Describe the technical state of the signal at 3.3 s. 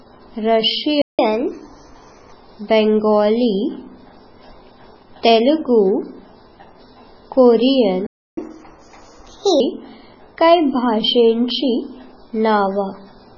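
MP3 compression is the likely cause of what is heard at 3.3 s, as throughout the clip: watery, swirling speech and smeared attacks, which points to a very low bitrate around 16 kbps.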